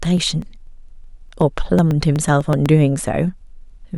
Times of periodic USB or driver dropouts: 0.05-2.66

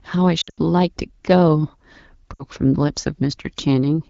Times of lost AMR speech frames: 0.41-0.59, 2.34-2.44

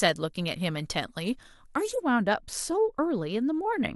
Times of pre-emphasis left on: 0.00-2.00

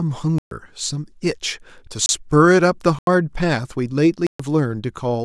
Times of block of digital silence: 0.38-0.51, 2.06-2.09, 2.99-3.07, 4.27-4.39

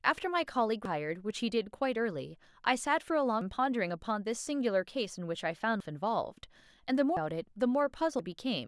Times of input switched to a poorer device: none

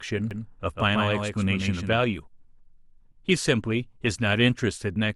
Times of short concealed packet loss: none

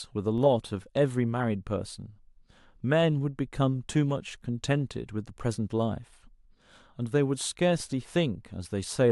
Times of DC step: 0.38, 7.80

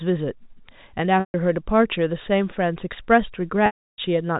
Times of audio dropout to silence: none

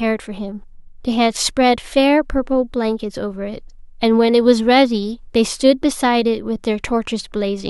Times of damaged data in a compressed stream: none

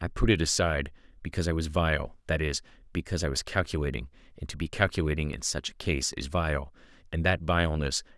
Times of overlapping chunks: none

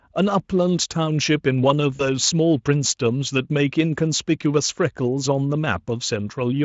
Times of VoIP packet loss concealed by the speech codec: 1.95-2.07

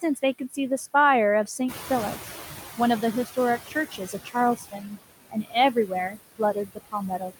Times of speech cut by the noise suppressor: 0.01-0.58, 3.68-4.93, 5.30-7.40

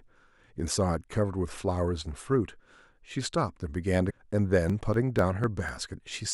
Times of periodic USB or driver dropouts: 4.70-6.18

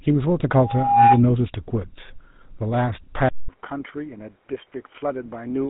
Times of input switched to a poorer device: 3.29-5.70

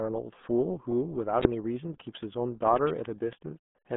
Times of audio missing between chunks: none

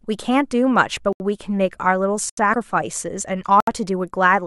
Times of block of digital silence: 1.13-1.20, 2.29-2.37, 3.60-3.67

